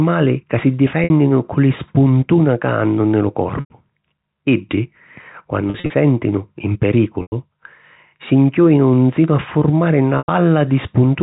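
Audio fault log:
1.04 to 10.28 s, packet loss with pitch repetition: Sound drops out five times, at 1.04, 3.60, 5.70, 7.22 and 10.18 s, after "ca si", "ca hannu nni lu" and "nsinu a furmari". The receiver repeats the last pitch period to fill each gap. At 5.70 s, 120 ms go missing in short runs over 200 ms, so it sounds held and buzzy. The other gaps last 60 to 100 ms. The repeat fades out, then sound returns with a brief cross-fade.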